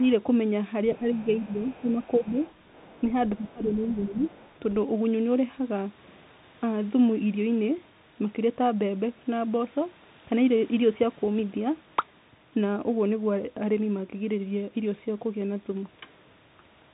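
Throughout, the speech comes through a Bluetooth CVSD headset codec, and the damage is plainly audible. Nothing above 3.8 kHz survives, so the sound is narrowband and dull. The codec sends one bit per sample, up or down, at 64 kbps, and its step size has to adapt. Loud, bright sounds outrun that step and distort. S sounds turn scratchy. A fine granular hiss sits under the speech.

At 0.03 to 0.07 s, a faint second voice appears, roughly 35 dB below the speech. This is the other side's voice leaking through, likely because the talker's loudspeaker, playing the other side, reached the microphone and the echo canceller missed it. It returns at 1.09 to 3.01 s and at 3.32 to 4.56 s, a little louder, around 30 dB down.

From 0.93 to 2.39 s, the main speech dips. This is speech suppressed in double talk. Both sides were likely talking at once, and the echo canceller turned everything down rather than separate them. 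The drops reach about 10 dB and add up to well under a second. The same happens again at 3.39 to 4.26 s. The voice sinks.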